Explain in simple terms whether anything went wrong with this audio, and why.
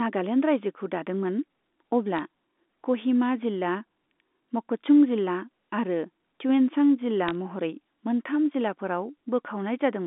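Two brief ticks come from bit errors on a digital phone line, at 2.17–2.19 s and 7.28–7.31 s, right after "जिल्ला आरो त्युएनसां जिल्ला". A tiny fraction of bits got flipped on the telephone link, and each flip corrupts one sample; a flip on a high bit makes a sharp tick over the speech.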